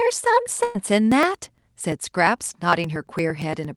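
At 0.63 s a burst of packet loss takes out roughly 0.13 s of the speech, running to 0.77 s. The receiver has nothing to play, so it conceals the gap by extending the last received sound for about 111 ms and fading it down, which is heard as a held buzz or hiss in place of real speech. When playback picks up again, about 120 ms of the original audio is gone.

From 1.12 s to the end of the clip there are periodic USB or driver dropouts, repeating every 0.115 s. Each time, something on the bus or in the driver stalls the audio stream briefly. The missed samples are skipped, not replaced with silence, so the waveform jumps at each point. This produces a steady train of ticks at about 8.7 per second, heard only where speech is present.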